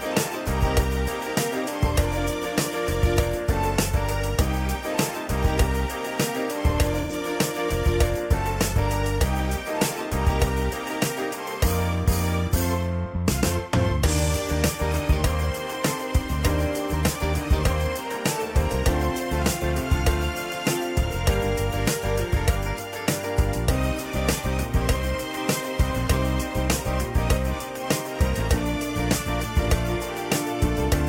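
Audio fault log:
7.01–7.12 s, AAC frame loss with concealment: about 85 ms of data went missing, which fits two lost frames. The decoder rebuilt it from the last good spectrum, leaving a brief smeared, noisy patch.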